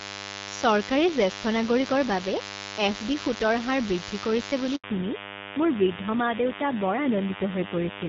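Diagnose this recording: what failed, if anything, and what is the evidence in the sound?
A steady, thin 100 Hz buzz with a dense stack of harmonics runs under the whole speech clip, sitting fairly high, only around 10 dB below the talker. That's DECT cordless phone buzz, and it's in the analogue wiring stage: a nearby DECT handset or base fires a radio burst every 10 ms, the audio circuit rectifies it, and the burst rate turns straight into an audible tone.

Right after "হাৰ বৃদ্ধি কৰিছে বুলি" the audio drops out from 4.76 to 4.84 s, an 80 ms hole where the speech decays quickly and goes silent before picking up again. That's a handover gap at the network stage. The call was being moved between networks, no speech frames came through during the switch, and whatever was said in those 80 ms is simply gone.

From 4.84 s to the end the bandwidth collapses: nothing above 4 kHz survives, and the speech gets duller and grittier than the HD Voice section before it, where the wideband codec at 12.65 kbit/s sounds clean with only light coding texture. 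That's a fallback to narrowband at the codec stage, tied to the same handover. The call renegotiated down to AMR narrowband at 7.4 kbit/s, which cuts the band in half and adds that rougher, low-rate quality.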